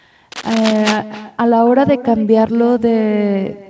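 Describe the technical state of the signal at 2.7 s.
At 2.7 s you're hearing echo with no canceller, and it runs through the whole clip, not just that moment. The far end is playing the call over a loudspeaker, its mic picks it back up, and nothing strips it out, so the speech returns after the network round trip. Here that's roughly a third of a second later and about 15 dB down: a fainter, thinner shadow trailing each phrase. The top end stops around 8 kHz, as is normal for this call path.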